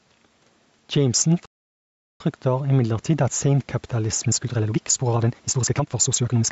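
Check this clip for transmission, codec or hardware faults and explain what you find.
Two faults stand out in this speech clip: gain pumping throughout and a playback stall early on.

Gain pumping runs through the whole clip. The input gain is likely set too high, so a fast limiter clamps down on each loud syllable. The level swings by roughly 5 dB, and dynamics sound squashed.

A playback stall occurs from 1.46 to 2.20 s. The player likely starved of data or had its thread blocked, so output went silent for about 0.74 s mid-phrase before resuming with "imidlertid at", leaving an abrupt gap in the flow.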